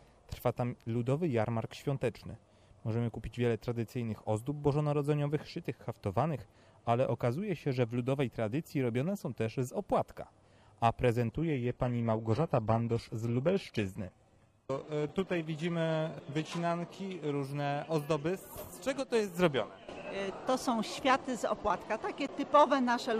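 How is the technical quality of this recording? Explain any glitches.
The recording has two kinds of fault: a stretch of reduced streaming quality and two brief dropouts to digital silence.

From 11.32 to 17.33 s the adaptive stream plays at a lower bitrate. The connection slowed, so the player switched to a leaner encoding, which sounds consistent with moving from roughly 96 kbit/s AAC to a 16 kbit/s HE-AAC stream. The treble turns thin, with swirly codec artefacts. Quality drops and recovers abruptly, with no gap. On a spectrogram, the content above 12.3 kHz vanishes for those six seconds, leaving a hard horizontal ceiling.

At 15.09 s (about 5.9 ms) and at 22.27 s (about 11.6 ms), a block of digital silence replaces the audio. The output buffer likely wasn't filled in time, so zeros went out instead. The second gap's length fits a 512-sample buffer. The sound cuts off and resumes with no fade, so each gap is heard as a tick or small pop. 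In the waveform, each appears as a near-flat line close to zero, with sharp vertical steps at both edges.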